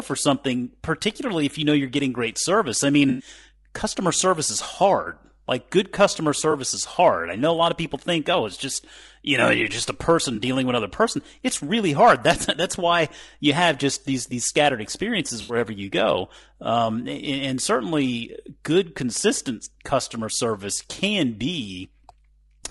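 Mains hum runs throughout at 50 Hz, about 35 dB below the speech: power-line current leaking into the signal path, probably through a ground loop or nearby transformer, leaves a steady low drone under everything, audible most clearly in pauses.

Low-delay AAC compression is also present throughout, heard as rough, grainy speech with noise filling the gaps between harmonics and a thin, synthetic-sounding top end. This is likely AAC-ELD at around 32 kbps, whose short frames cannot resolve pitch detail well at that rate.

AAC frame loss with concealment occurs four times. The decoder covers each missing stretch by extending the last good spectrum, which produces smeared, noisy patches. The first is at 3.09–3.27 s, after "getting great service I" and before "customer service is hard", and covers about 100 ms. The second is at 6.51–6.54 s, after "good customer" and before "is hard I know", and covers about 20 ms. 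The third is at 10.35–10.39 s, after "you're just a person" and before "dealing with another person", also about 20 ms. The last is at 15.41–15.55 s and covers about 80 ms. These losses are consistent with 20 ms frames.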